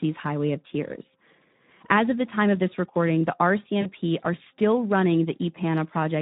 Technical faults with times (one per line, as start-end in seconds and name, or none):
0.00-6.21 Speex codec
3.81-3.89 VoIP packet loss concealed by the speech codec